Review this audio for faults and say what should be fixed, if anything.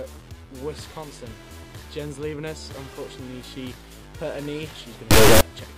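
From 5.11 to 5.41 s a harsh, extremely loud buzzing square wave erupts: integer read as float, with 32-bit integer samples decoded as 32-bit floats. Prevent it by tagging and checking the sample format at every hand-off between stages.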